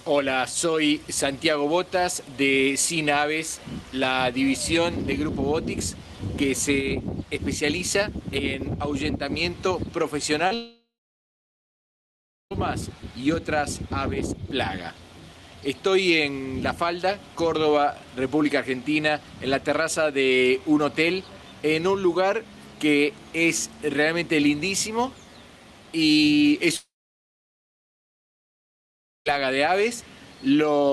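Short concealed packet loss at 10.47 to 10.53 s: about 40 ms of the stream arrived too late, so the receiver extended the preceding sound, leaving a brief smear or wobble.

Long network dropout, likely, at 10.55 to 12.52 s and again at 26.77 to 29.27 s: the concealment buzz fades within a fraction of a second, leaving roughly 1.6 s and 2.4 s of silence before the audio resumes with that stretch missing.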